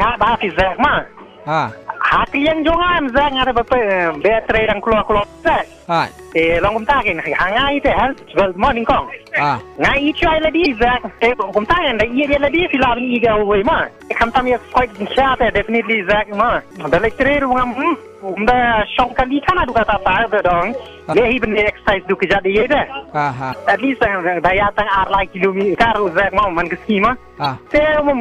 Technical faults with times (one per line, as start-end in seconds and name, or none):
10.62-10.67 damaged data in a compressed stream
15.14-15.18 damaged data in a compressed stream
21.10-21.14 damaged data in a compressed stream
23.50-23.54 damaged data in a compressed stream
27.42-27.46 damaged data in a compressed stream